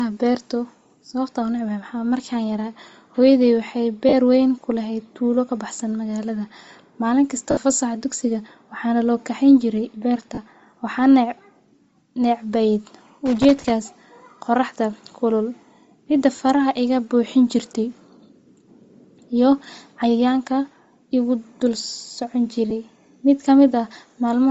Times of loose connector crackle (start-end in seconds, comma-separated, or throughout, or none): 13.26-13.70